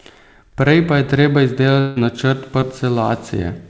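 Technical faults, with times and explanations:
1.80 to 1.98 s, long network dropout: Right after "pa je treba", the sound turns into a fading buzzy continuation for about 160 ms and then resumes further on. The likely cause is that a stretch of audio never arrived. The receiver extended the last sound to cover the gap, and nothing was left fully silent.
2.60 to 2.64 s, short concealed packet loss: A brief smear is heard here. About 20 ms of audio reached the decoder too late to play. The receiver filled roughly 17 ms of that hole by continuing the preceding sound, then blended back into the real signal.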